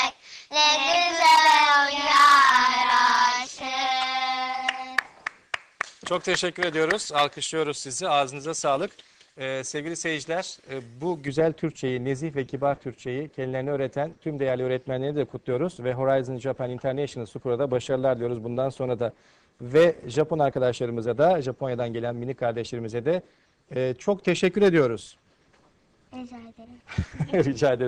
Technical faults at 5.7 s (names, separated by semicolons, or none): pre-emphasis left on